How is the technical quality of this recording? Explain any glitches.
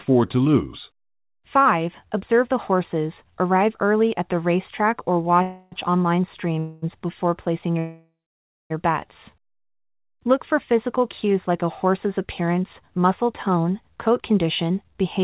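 It's a phone-quality speech recording: nothing above 4 kHz, which fits a narrowband codec like G.711 at 64 kbps. There are two kinds of glitch.

Call audio freeze at 5.42–5.74 s, 6.59–6.84 s and 7.79–8.72 s: the sound stalls into a fading smear, likely because packets ran late. The last stall goes silent for about 0.6 s, then picks up where it stopped.

Jitter buffer speed-up from 13.49 to 15.20 s: the receiver trims tiny pitch-period slices, about 0.15 s in total, so the speech runs roughly 8% faster at unchanged pitch and sounds slightly rushed.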